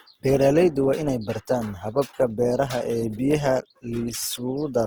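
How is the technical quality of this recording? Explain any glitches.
The recording has two technical faults: coding damage that runs through the whole clip, and a short stretch of clock instability near the start.

Opus compression, present throughout, is the likely cause of the grainy texture. When the encoder is starved of bits, it keeps each band's overall energy but fills in detail by copying lower bands or adding noise. The damage is plainly audible, and the roughness points to a low rate near 16 kbps in the codec's full-bandwidth music mode. Content still reaches about 20.2 kHz, so the sound isn't muffled. Instead, the speech takes on a rough, noisy edge rather than a swirling one.

Sample clock jitter appears from about 0.39 to 2.02 s. During that span, the converter's clock wanders by about 0.7 microseconds, so each sample is taken slightly early or late. Those timing errors cost the most where the waveform changes fastest. 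The result is a faint hiss or roughness, roughly 50 dB below the signal, that rides on louder and brighter moments and drops away when the sound goes quiet.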